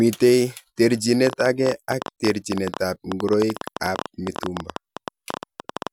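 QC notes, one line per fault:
1.27–5.88 s, train of clicks: something in the chain is likely injecting repeated impulses, most plausibly interference from nearby equipment or a struggling interface, at about 11.7 per second on an irregular pace. Around fifty near-identical clicks result, peaking roughly 10 dB above the speech. They cut through it as an uneven ticking that carries on through the pauses, because the pulses arrive independently of the signal underneath.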